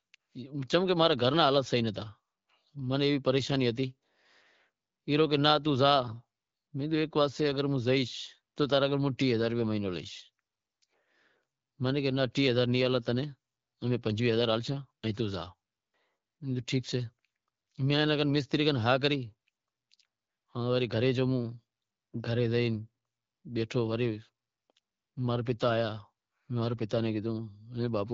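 No technical faults can be heard anywhere in this speech. The AMR wideband (HD Voice) codec is working normally at 12.65 kbit/s, where it leaves only light coding marks, and the top band from 6.4 to 7 kHz is filled with shaped noise rather than coded directly.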